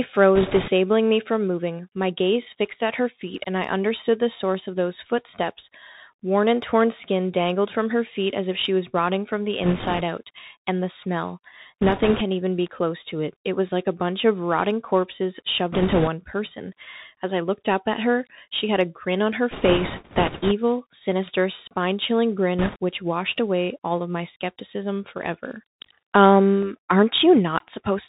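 Bluetooth CVSD headset codec, present from start to finish. The speech sounds like a narrowband headset link at what sounds like 64 kbps. The codec sends one bit per sample, a simple up or down, and adapts its step size. Nothing above 4 kHz survives, so the sound is boxed in and dull. Loud, bright moments outrun the step and distort, sibilants turn scratchy, and a fine granular hiss sits under everything.

Bit errors on a Bluetooth voice link come in bursts at 0.35–0.71 s, 9.63–10.02 s and 11.81–12.22 s, at 15.72–16.08 s right after "bunch of rotting corpses", in the longest stretch at 19.51–20.53 s between "a grin on her" and "sinister spine chilling", and at 22.59–22.77 s. In each burst a few percent of the transmitted bits were flipped. Each CVSD bit carries only a small step and its effect fades, so there are no loud clicks. Instead a rushing, crackly noise rides over the speech, roughest in the final short burst.

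Bit error spike at 12.67 s, between "even be" and "close to it". Here three consecutive samples were corrupted, pushing the waveform by a power-of-two jump before it snaps back. It comes through as one sharp, broadband tick that has nothing to do with the speech around it, unlike the smeared crackle of the burst errors.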